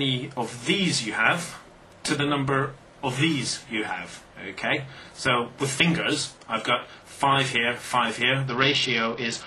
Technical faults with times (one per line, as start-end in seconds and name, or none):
8.48-9.47 Bluetooth SBC bit pool drop